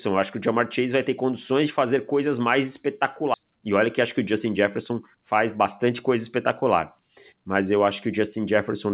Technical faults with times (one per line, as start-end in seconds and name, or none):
3.34-3.36 skip ahead
4.02-5.23 jitter buffer speed-up